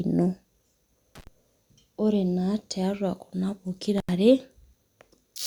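At 1.15 s the speech drops out in an intermittent contact fault. A loose plug or cable briefly breaks the signal path. The gap lasts about 73 ms, with crackle at each edge and faint hiss inside. It ends at 1.27 s. The same fault returns right after "tiatua kuna", from 3.98 s to 4.10 s. This time the line stays open for about 85 ms. Both dropouts sound like abrupt, crackly holes in the audio.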